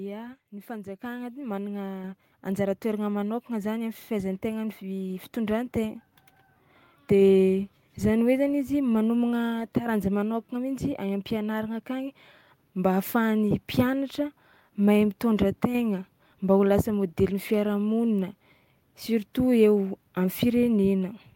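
At 1.02 s the microphone volume is stepped up by about 6 dB. Another step of about 4 dB follows at 2.04 s, and one of about 2 dB at 12.51 s. Each time the input gain was raised at once. Speech and background jump louder together.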